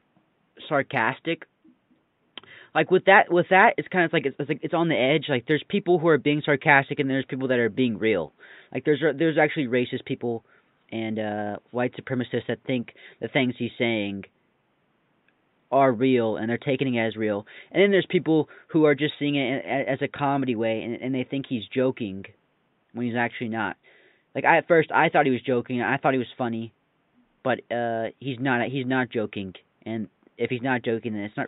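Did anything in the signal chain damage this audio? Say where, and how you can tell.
No, nothing in the signal chain damaged this audio.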